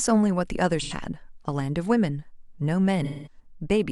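Speech with AAC frame loss and concealment. At 0.82–0.93 s and 3.04–3.39 s, the decoder rebuilds missing frames from earlier spectrum, leaving smeared, noisy patches.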